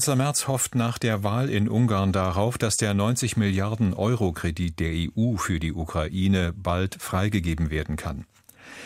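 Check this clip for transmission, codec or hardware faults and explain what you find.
No transmission, codec or hardware faults turn up in this clip.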